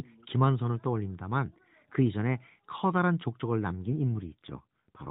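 Speech coded over a narrowband mobile link (AMR-NB, capped near 4 kHz) suffers an AMR rate drop at 3.84 s that lasts to the end: the codec falls to a lower mode, fitting 12.2 to 5.9 kbps, so the voice turns buzzier and more synthetic, with no gap or band change.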